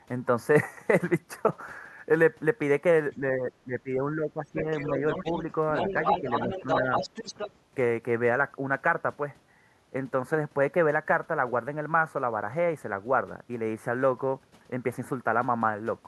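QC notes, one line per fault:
3.11–4.67 s, 6.20–6.27 s and 6.47–6.65 s, speech suppressed in double talk: the talker's speech dips by about 10 dB in patches, about a second in total during the first span, with short gaps later. These are likely the echo canceller turning everything down while both sides speak. They appear as notches in the waveform envelope and thinned, darker bands on the spectrogram.
4.56–5.41 s and 5.74–7.52 s, other side's voice leaking through: a second, weaker voice sits under the talker, roughly 10 dB below the speech at first and about 5 dB below in the later span. It is likely loudspeaker echo the canceller left in. On the spectrogram it shows as an extra harmonic pattern overlapping the main speech.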